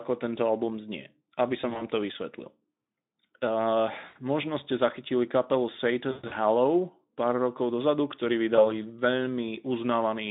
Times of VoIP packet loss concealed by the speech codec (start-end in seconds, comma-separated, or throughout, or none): 1.61-1.90, 4.05-4.18, 6.11-6.32, 8.55-8.67